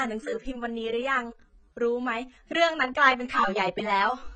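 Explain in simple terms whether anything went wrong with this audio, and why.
The speech sounds dull and smeary the whole way through, with nothing above 9 kHz, which is likely heavy AAC compression squeezing the file too hard.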